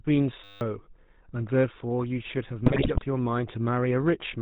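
From start to finish the speech carries the roughness of the GSM full-rate codec, consistent with the 13 kbps GSM full-rate scheme. The codec rebuilds the voice from a vocal-tract filter driven by sparse, regularly spaced pulses, so voicing takes on a buzzy, gravelly grain. On a spectrogram everything stops sharply at 4 kHz, with nothing above that line, and the harmonics look smeared and coarse rather than clean.

From 0.44 to 0.61 s a system hang loop takes over. The machine stalled while the audio hardware kept replaying the same stretch of its ring buffer. A single 10 ms slice repeats about 17 times, which becomes a steady buzz at 100 Hz in place of the speech, and about 150 ms of real audio never arrives. The waveform shows an identical short cycle copied end to end. The spectrogram shows evenly spaced horizontal lines at 100 Hz and its multiples.

Between 2.66 and 3.03 s GSM bit errors break up the speech, consistent with roughly 5% of bits flipped across around 18 frames. 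Corrupted filter, pitch and gain values reach the decoder, so each damaged frame comes out with a bent spectrum or a sudden jump in level. The result is squawks, pops and gargling. The waveform shows abrupt spikes and level jumps at frame boundaries. The spectrogram shows blocky, misplaced energy bands that shift from frame to frame.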